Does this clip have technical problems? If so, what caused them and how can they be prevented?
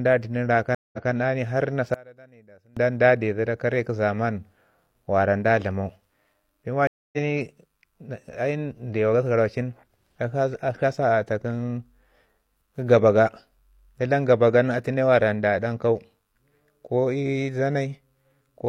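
Yes. Two stream reconnects and one channel inverted.

Stream reconnect at 0.75 to 1.11 s and 6.87 to 7.18 s. Each time the connection broke, the player went quiet, then reopened the stream with a new decoder. The first gap lasts 181 ms, and the audio picks up 186 ms earlier, so a short stretch repeats. The second gap lasts 254 ms and resumes about a fifth of a second later, so a little is skipped. A plain dropout would continue where it stopped, but this one jumps backward or forward in time. Larger client buffering and connection keep-alive with seamless resume would prevent it.

From 1.94 to 2.77 s the level falls by about 28 dB and only a faint residue remains. The likely cause is one channel inverted: with one stereo side in reversed polarity, the centred content cancels when the two channels are mixed to mono. A mute or gain fault would go fully silent or dull evenly, but here a faint difference signal survives. 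Checking channel polarity in the stereo path, or summing with a correlation check before mono downmixing, would prevent it.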